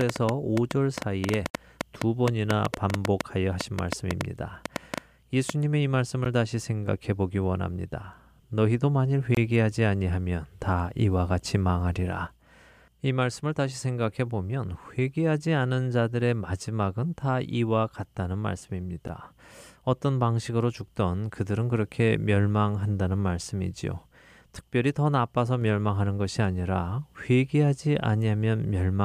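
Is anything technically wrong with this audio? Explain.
Yes, there are two faults.

From 0.01 s to about 5.50 s a train of clicks ticks over the speech: around thirty sharp pops, about six per second but unevenly spaced, each much the same shape and standing out strongly, roughly 20 dB above the speech, audible in pauses as well as under talking. A repeated pulse from outside the audio, likely interference from nearby equipment or a faulty connection or power supply, would produce a sequence like this.

There are also four blocks of digital silence, at 1.50 s (about 46 ms), 6.25 s (about 12 ms), 9.35 s (about 23 ms) and 19.08 s (about 12 ms). Each cuts the speech straight to dead silence and back with no fade, so the 12 ms ones register as a tick and the 23 ms and 46 ms ones as a brief hole. The lengths fit whole buffers of 512, 1024 and 2048 samples, pointing to the playback or recording software failing to fill its output buffer in time.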